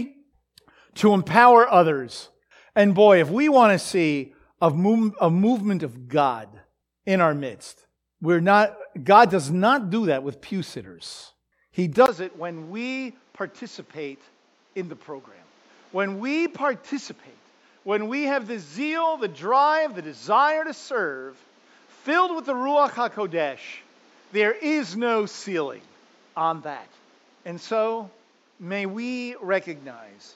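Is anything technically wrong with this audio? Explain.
Yes. From 12.06 s to the end, the speech turns duller and drops roughly 10 dB after a 20 ms gap, with nothing above 7.6 kHz and a new background noise about 35 dB down. It's likely an input switched to a poorer device, a narrower-band mic with its own noise.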